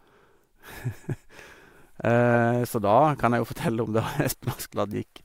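No technical faults are audible.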